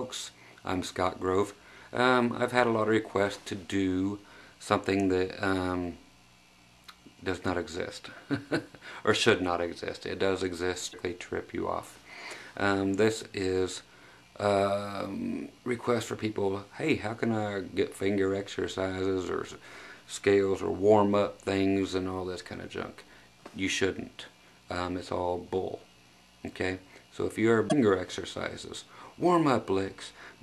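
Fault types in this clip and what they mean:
Damaged data in a compressed stream: corrupted bytes make the decoder lose sync briefly, so you get short garbled blips around 10.9 s and 27.7 s.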